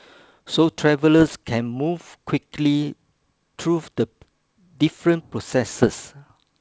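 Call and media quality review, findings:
Bit errors on an ADPCM link: pops and rough, level-jumping bursts at 1.20–1.36 s and 5.78–5.96 s. Flipped bits knock the decoder's step size and predictor off, so each hit rings on briefly. Error rate roughly 0.7–1 percent.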